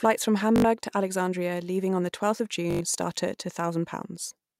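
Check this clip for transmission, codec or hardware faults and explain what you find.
Two short buzzing stutters break the speech, at 0.56 to 0.64 s and again at 2.71 to 2.81 s. Each is a Bluetooth stutter: a tiny slice of sound repeats rapidly, giving a machine-gun rattle, then the speech resumes further on, as if it had played on. The receiver lacked fresh data for about 81 ms and about 100 ms, a gap that fits four and five lost or late packets, and replayed its last buffer until new audio arrived.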